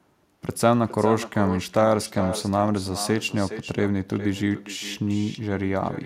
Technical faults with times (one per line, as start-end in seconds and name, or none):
0.00-6.05 echo with no canceller